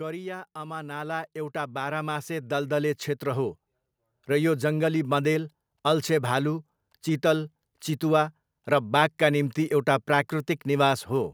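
From 0.53 to 3.62 s the automatic gain rises by about 12 dB, as the control judges the input too quiet and ramps up over three seconds. Unlike a talker leaning closer, the background noise swells in step with the speech.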